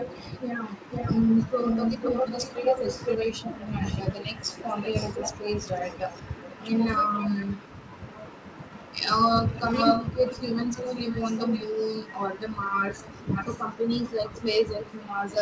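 A loudspeaker-side echo canceller has likely failed to remove what its microphone picked up, producing an echo leak throughout, from 0.0 to 15.4 s. A delayed copy of the speech returns about 0.49 s behind the original, sitting roughly 10 dB below it, so a fainter repeat trails the speech. It rides on top of the call path's band-limited sound, with nothing above 8 kHz, which fits G.722 at around 64 kbps.

Speech suppressed in double talk appears in four places. The canceller, probably unable to separate the local talker from loudspeaker echo while both sides spoke, turned both down. Between 3.18 and 3.83 s and again between 5.35 and 6.62 s the speech sinks by as much as about 20 dB. At 4.48 to 4.60 s there is a shallower dip of about 10 dB, and at 7.44 to 7.66 s one of about 15 dB. Each sounds like the speech briefly ducking or dropping out in pieces.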